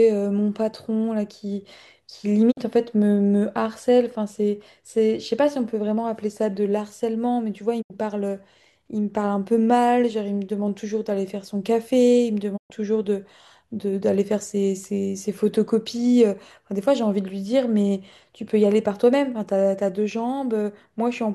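Digital broadcast dropouts occur three times: the receiver lost valid frames and muted. The speech fades out over 20 ms and vanishes at 2.50 to 2.59 s, 7.81 to 7.92 s and 12.56 to 12.72 s. Those gaps fit two, three and five lost 24 ms frames. That audio is gone.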